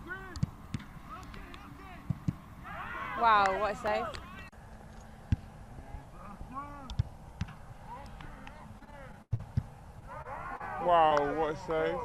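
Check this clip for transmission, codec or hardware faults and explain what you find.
Several packet-delivery faults cluster in the final three seconds.

From 8.79 to 9.42 s there is repeated packet loss (robotic sound). Six gaps, the longest 86 ms, were bridged by extending earlier sound. About 29% of the span is filled this way and 80 ms is lost outright, so the audio turns choppy. A spectrogram shows smeared, repeated harmonic blocks with abrupt seams.

At 9.99–10.05 s and 10.22–10.28 s there are short stalls from a late packet. Each time the jitter buffer ran dry, and about 28–29 ms of sound was stretched until the packet arrived. Nothing is missing, just a brief held tone, which shows as a flat, frozen strip.

At 10.57–10.63 s and 11.08–11.14 s there is short concealed packet loss. About 40 ms went missing each time and was patched with roughly 30 ms of extrapolated sound. It is heard as a quick smear or wobble, and the waveform shows a short patched stretch blended into the real audio.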